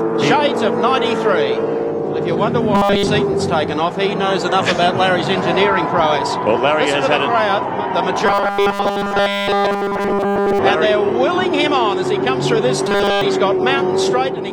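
Robotic sound from repeated short buffers at 2.75–3.07 s, 8.26–10.59 s and 12.89–13.21 s: a rigid metallic 200 Hz buzz, likely from a 5 ms fragment looped while nearly all new audio went missing.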